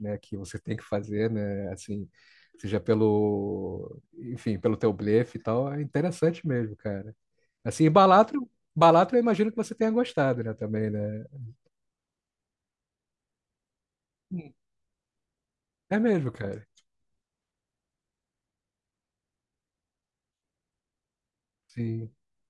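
Listening through the speech, nothing stood out as a technical problem at any point.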